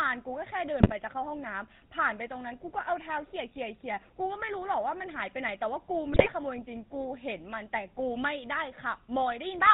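From the start and through the whole recording, the speech carries the GSM full-rate codec sound, plainly audible as a buzzy, gravelly roughness, which fits a 13 kbps full-rate stream. The codec rebuilds the voice from a vocal-tract model fed by sparse, regularly spaced excitation pulses, which leaves a coarse, rasping texture. On a spectrogram the energy stops abruptly at 4 kHz, and harmonics look smeared and grainy instead of clean.

GSM bit errors break in twice, at 0.80 to 0.93 s and again at 6.12 to 6.28 s. Over several consecutive frames, corrupted filter, pitch and gain values reach the decoder, so the voice lurches into brief squawks, pops and gargling. The waveform shows sudden level spikes or collapses frame by frame, and the spectrogram shows short blocks with warped formants and bursts of misplaced energy.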